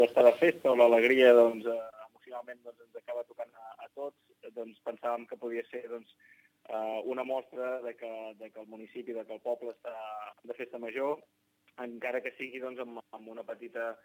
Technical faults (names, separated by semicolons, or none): sample clock jitter